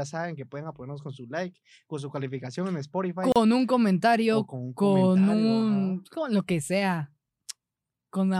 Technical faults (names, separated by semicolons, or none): gap at a join of encoded pieces